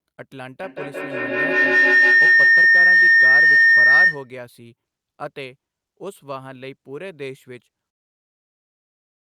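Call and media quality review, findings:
Feedback howl, 0.63 to 4.36 s: tone near 2 kHz climbs to about 17 dB above speech, pulsing roughly every 150 ms. Likely two devices in one room; mic-to-speaker loop gains each pass. Unlike echo, repeats grow rather than fade.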